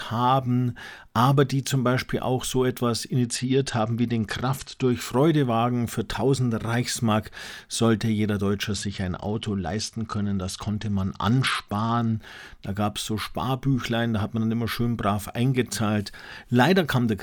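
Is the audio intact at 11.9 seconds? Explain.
No. At 11.9 s you're inside a Bluetooth SBC bit pool drop running from about 8.70 to 12.17 s, starting just after "sollte jeder". The link got congested and the encoder cut its bit budget, which sounds like a fall from a bit pool of 31 to 11, around 83 kbps. The top sub-bands get starved and the rest are quantised coarsely, so the speech goes dull and gritty until the rate recovers.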